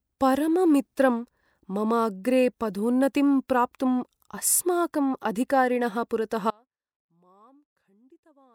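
An audio dropout to a faint residue hits this speech clip at 6.51 s, just after "अस्माकम् अधिकारिणः पुरतः", leaving only faint sound roughly 35 dB down to the end, likely a signal loss ahead of a still-live path.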